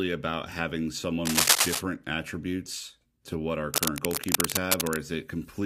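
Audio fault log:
1.25–1.81 s and 3.74–4.99 s, cable scratch noise. Dense, uneven bursts of scratching and rustling sit over the speech after "about having" and again after "attributes to what our". The first burst is about 5 dB above the speech. The second is about level with it. A worn cable or connector being moved is the likely cause, its contact resistance changing rapidly.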